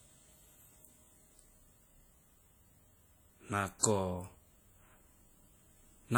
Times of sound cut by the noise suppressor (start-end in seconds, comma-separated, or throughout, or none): none